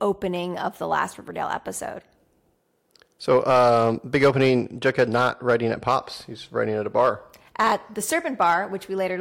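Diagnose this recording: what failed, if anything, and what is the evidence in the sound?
Hard clipping runs from 3.31 to 5.97 s, driven about 6 dB past full scale, then returns in short bursts at 6.97–7.09 s, just after "writing at a" (about 3 dB over), 7.60–7.72 s (about 5 dB) and 8.42–8.54 s (about 2 dB). The speech peaks exceed what the converter or the gain stage feeding it can represent, so the waveform tops are sliced flat, adding high harmonics heard as crackle or harsh fuzz on the peaks.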